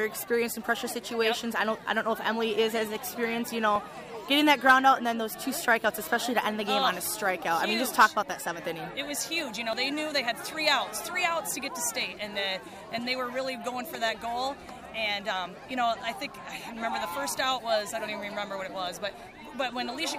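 A chunked recording likely dropped roughly 30 ms while switching between 6-second chunks, so at 9.73 s the sound skips abruptly: audio missing between chunks.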